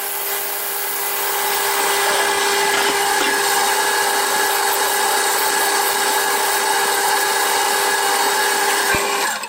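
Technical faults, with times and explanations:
8.95 to 8.97 s, loud pop: a single sharp pop, lasting only a couple of hundredths of a second, breaks through near the very end, peaking a few decibels above the surrounding audio while the sound carries on underneath without a break. Its abrupt onset and short, slightly rounded tail point to a likely cause in a sudden electrical step or spike, such as a switch, connector or static discharge, which the following circuitry smoothed into a brief thump.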